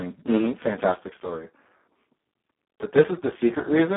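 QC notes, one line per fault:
Throughout: Speex codec, heavy damage; hoarse, robotic CELP buzz, consistent with a very low 4 kbps setting, in a 250 Hz to 3.4 kHz band, with nothing above 3.8 kHz.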